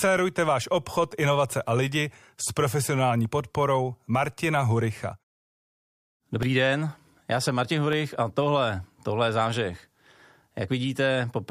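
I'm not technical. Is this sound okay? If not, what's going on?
No. From 5.43 to 8.93 s, starting just before "tohle je", ticks occur every half second. These are periodic USB or driver dropouts: a stalled connection leaves tiny silent gaps.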